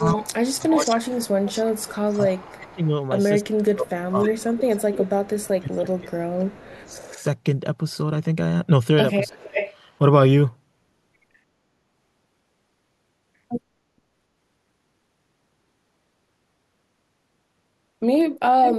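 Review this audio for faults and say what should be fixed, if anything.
Speech suppressed in double talk, 0.0 to 7.16 s and 9.32 to 9.53 s: the speech dips by as much as roughly 25 dB. This is likely an echo canceller turning down both sides while they talked at once. Better double-talk detection in the canceller would prevent it.

Echo leak, 0.08 to 7.24 s, 9.28 to 9.74 s and 18.63 to 18.76 s: a copy of the speech trails the original by 0.32 to 0.35 s, about 5 to 20 dB quieter. It is likely loudspeaker sound that the far end's echo canceller did not fully remove. A headset or a better-tuned canceller at the far end would prevent it.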